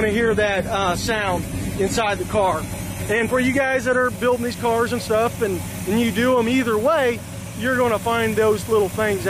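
For the first 4 s you're hearing an adaptive stream starting at a low bitrate. The player grabbed a lean version to get going fast, then switched up once it had a read on the connection. Until the switch, the top end is gone, with nothing above 14 kHz, and there's more codec smear. That fits roughly 32 kbit/s AAC-LC. At 4.0 s it jumps cleanly, with no gap, to something like 96 kbit/s.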